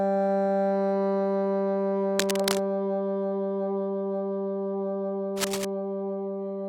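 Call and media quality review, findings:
Cable scratch noise, 2.18–2.58 s: dense, uneven burst of scratching over the audio, nearly as loud as the signal itself. Likely a worn cable or connector being moved, contact resistance fluctuating rapidly.

Cable scratch noise, 5.37–5.65 s: same rustling texture, similar strength, shorter. Likely a worn contact path.

Differs from codec dropouts or isolated clicks: continuous irregular noise riding over the sound, no gaps or single transients.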